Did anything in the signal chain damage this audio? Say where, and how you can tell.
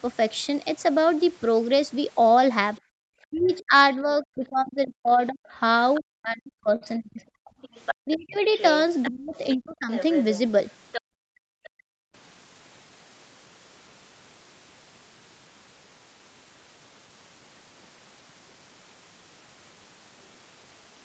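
Yes. Other side's voice leaking through, at the call-processing stage: a second voice sits under the talker from 2.77 to 3.57 s at about 25 dB down, briefly at 5.95 s at about 20 dB down, and from 7.62 to 11.70 s at only about 10 dB down. This is likely residual loudspeaker echo the canceller failed to remove. A spectrogram shows an independent harmonic stack.

Background gated by the echo canceller, also in call processing: the room floor collapses by about 34 dB from 2.81 to 2.98 s, roughly 150 ms, and again from 11.02 to 12.14 s for about a second. The waveform shows the noise floor abruptly flattening, and the spectrogram shows blank vertical bands where the canceller clamped the microphone.

Speech suppressed in double talk: between 3.26 and 9.92 s, about four seconds of the talker's speech dips, at worst by roughly 40 dB, while the far side is active. This is likely the canceller attenuating everything when both ends overlap. 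The envelope shows chopped, hollowed syllables, and the spectrogram shows high-frequency energy vanishing in patches.

Short stall from a late packet, at the network and jitter-buffer stage: at 6.50 s a sound is held for 20 ms, and at 6.76 s for 52 ms, with nothing lost afterwards. Each stall adds that much delay. A spectrogram shows frozen, horizontally smeared frames, and the waveform shows a repeated periodic segment.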